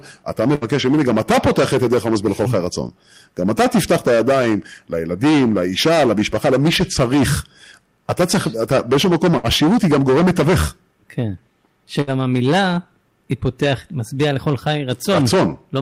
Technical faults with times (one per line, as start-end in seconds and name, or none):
0.00-15.82 hard clipping
0.55-0.64 burst of packet loss
9.37-9.46 burst of packet loss
12.01-12.10 burst of packet loss